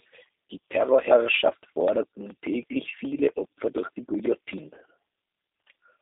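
Throughout, the speech sounds rough and plainly synthetic, confined to roughly 250 Hz to 3.7 kHz: the G.729 codec is rebuilding it from filter and pulse models, consistent with its 8 kbit/s rate.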